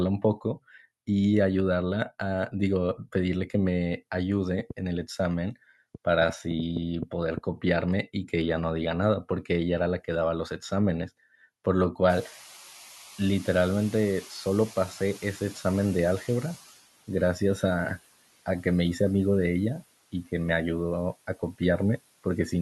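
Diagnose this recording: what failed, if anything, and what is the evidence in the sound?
Train of clicks, 4.6 to 7.4 s: about ten similar pops at an irregular 3.2 per second, peaking roughly 10 dB above the speech and audible in gaps too. This points to the analogue wiring stage, likely interference from nearby equipment or a faulty connection injecting pulses.

Noise suppressor catching up, 12.09 to 16.69 s: when the room noise jumps about 24 dB near 12 s, it first passes through with less reduction. Over 4.6 s it sinks by about 10 dB as the call-processing suppressor's noise estimate slowly adapts.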